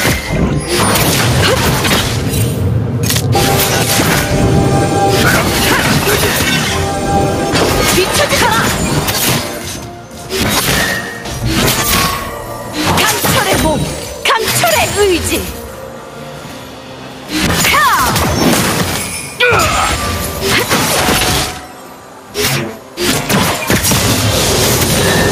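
Gain pumping runs through the whole recording: the level swings by roughly 10 dB as the gain is pulled down on each loud sound, likely from input gain set far too high with a fast limiter clamping it. The waveform looks flattened.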